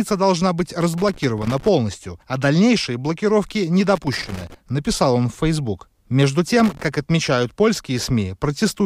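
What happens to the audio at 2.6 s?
Nothing goes wrong at 2.6 s; the speech runs on intact through that moment, with no dropout, click, distortion or other audible fault.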